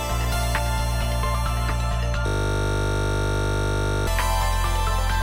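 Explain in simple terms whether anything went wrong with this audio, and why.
Something did go wrong, from about 2.27 to 4.07 seconds. That is a system hang loop: the computer or its sound driver briefly froze, but the sound hardware kept replaying the last tiny slice of audio it had, just 20 milliseconds long, over and over, roughly ninety times. Because that slice repeats 50 times a second, it comes out as a steady buzz at 50 Hz rather than a choppy stutter. Unlike mains hum, it starts and stops abruptly and replaces the audio instead of sitting underneath it.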